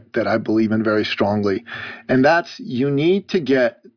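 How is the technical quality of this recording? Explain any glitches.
The signal holds steady throughout, with no glitches or technical faults to be heard anywhere in the recording.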